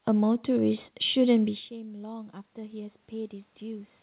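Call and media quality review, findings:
Automatic gain rising, 1.68 to 4.02 s. Speech input dropped about 18 dB after the talker moved away around 1.5 s. AGC raises gain slowly, by about 6 dB. Voice and room noise swell together. Nothing above 4 kHz, consistent with G.711 mu-law.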